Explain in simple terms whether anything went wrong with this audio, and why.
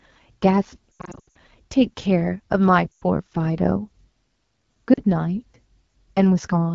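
The speech sounds rough and raspy from start to finish. That is the AMR wideband (HD Voice) codec, the compression used for HD phone calls, running at one of its lowest-quality settings. To save data, it rebuilds the speech from a simplified model of the throat and mouth and fills the highest tones with shaped hiss. At this low setting the rebuild can't keep up, so the harshness is plainly audible.

There are also three short breaks. From about 0.92 to 1.35 s the sound repeatedly smears, warbles and fades in and out. Shorter dips follow at about 2.93 to 3.04 s and 4.94 to 5.02 s. These are lost AMR speech frames: radio errors corrupted small chunks of the call, and the phone covered each gap by repeating the last good sound while turning it down. The first spot is worst because many chunks were lost in quick succession there.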